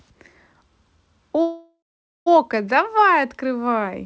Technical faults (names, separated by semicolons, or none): call audio freeze